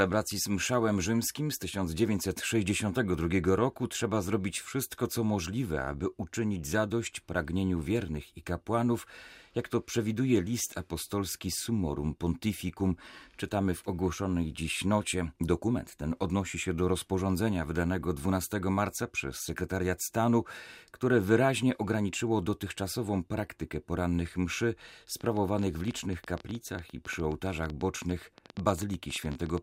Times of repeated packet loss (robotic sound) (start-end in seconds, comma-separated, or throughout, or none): none